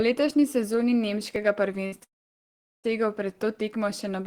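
At 1.36 s the speech jumps forward abruptly with no gap of silence, as though a tiny sliver had been snipped out and the edges butted together. This is likely a dropped buffer (overrun): the recording software failed to read a block of samples before the hardware wrote over it, so a few milliseconds of audio vanished and the surrounding material was spliced directly.

From 1.86 to 1.94 s the speech briefly smears into a held, fading sound rather than continuing naturally, then picks up again slightly further along. That is a burst of packet loss. About 60 ms of audio never arrived in time. For roughly 56 ms the receiver extended the last received sound and faded it down to cover the hole. When fresh packets resumed, the speech carried on from a later point, with that short stretch missing.

At 2.04 s the speech cuts out for much longer. A short tail of extended sound fades away, followed by about 0.76 s of silence until the audio returns at 2.86 s, further on in the speech. 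The likely cause is a long network dropout. Nothing reached the receiver for roughly 800 ms, so after a brief concealment attempt it had only silence to play, and that entire portion is absent.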